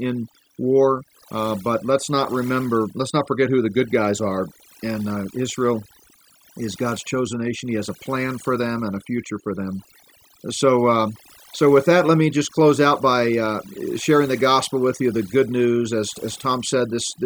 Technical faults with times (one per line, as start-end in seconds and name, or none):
0.00-17.25 overdone noise removal